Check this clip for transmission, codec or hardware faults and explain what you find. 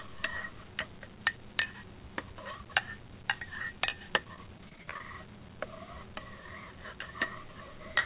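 One transmission fault is present, and it sits inside a narrowband call path with nothing above 4 kHz, which fits G.711 mu-law at 64 kbps.

Repeated packet loss (robotic sound) runs from 4.24 to 5.03 s. Packets kept going missing, with roughly thirteen short holes, the longest about 22 ms. Each hole was patched by stretching the previous sound. About a fifth of the stretch is concealed, so the sound turns choppy, with pieces missing.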